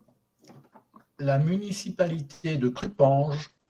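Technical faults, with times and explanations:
2.31–2.46 s, call audio freeze: the sound stalls for about 0.12 s as the last moment is stretched into a fading buzz, then resumes where it stopped with nothing lost. Packets were likely held up in transit, draining the jitter buffer. A spectrogram shows smeared, decaying horizontal bands.
2.79–3.69 s, call bitrate drop: from 32 to 11 kbps the audio turns coarse and muffled to the end, its bandwidth falling from 20 kHz to 8 kHz after the encoder was told to spend fewer bits. A spectrogram shows energy sharply cut off above 8 kHz.
2.79–2.83 s, short concealed packet loss: about 40 ms of audio never arrived, and the receiver bridged the hole by extending the preceding sound before blending back, heard as a brief smear. On the waveform a short stretch looks carried over from what came before, with no fresh onset.
3.03–3.21 s, jitter buffer slow-down: the receiver repeated pitch periods to build a reserve, adding 36 ms so this stretch plays at 85% speed with unchanged pitch, sounding drawn out. 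A spectrogram shows harmonics held steady slightly longer, and the waveform shows repeated identical cycles.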